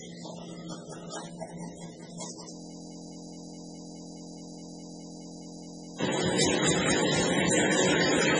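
A recording of everyday sound, heavily band-limited throughout: nothing is present above about 10.2 kHz, and the remaining content has a watery, swirling texture with smeared attacks. This is likely MP3 compression at a very low rate, around 16 kbps. Weak frequency components drop in and out from frame to frame. Unlike a simple low-pass filter, the texture itself wobbles as well as the treble being cut, which points to a codec rather than plain filtering. From 2.53 s to 6.00 s a system hang loop takes over: one 23.22 ms slice of audio repeats exactly, producing a steady buzz at 43.1 Hz, which fits a 1024-sample buffer cycling while the system was frozen. A dropout or ordinary stutter breaks the sound irregularly. Here the identical repetition is so short and regular that it fuses into a pitched drone rather than a machine-gun rattle.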